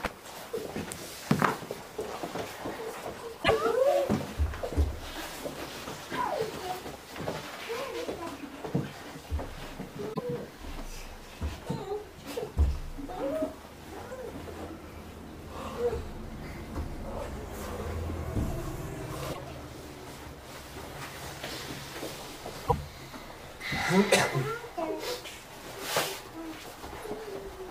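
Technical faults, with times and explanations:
3.41–3.51 s, 10.12–10.19 s, 19.29–19.39 s and 22.64–22.73 s: damaged data in a compressed stream. Four short bursts, each lasting 70 to 100 ms, break into the audio as a chirp, squawk, click or short hole. At each point the encoded stream holds corrupt bytes, so the decoder misreads or rejects those frames and loses its lock on the frame structure. It then hunts for the next valid frame header before normal playback resumes.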